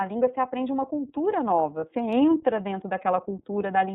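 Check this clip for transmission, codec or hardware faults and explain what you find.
Two faults are present: the whole clip has passed through the iLBC codec, and a lost iLBC frame briefly interrupts it.

iLBC codec, throughout: The speech is band-limited, with nothing above 4 kHz, so sibilants and consonant edges are dulled. Each frame's excitation is coded independently at a low rate, which gives the voice a plainly audible rough, slightly synthetic texture. The character fits iLBC's 13.33 kbps mode with 30 ms frames.

Lost iLBC frames, 1.80 to 1.84 s: A gap of about 30 ms, consistent with a single lost frame, is filled by the decoder's concealment. It repeats the last pitch cycle blended with noise, so the dropout is heard as a short held, faintly buzzy vowel rather than silence. Because each iLBC frame decodes without depending on the one before, the speech returns to its normal coded sound as soon as the next frame arrives.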